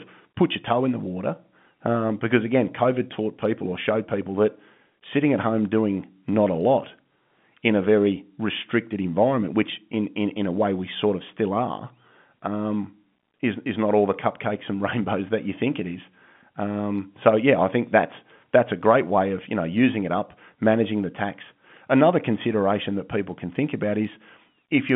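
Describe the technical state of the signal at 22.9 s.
At 22.9 s the signal is intact, carrying the speech through the narrow telephone band of roughly 150 Hz to 3.5 kHz that G.711 telephone coding gives it, with no fault at that moment.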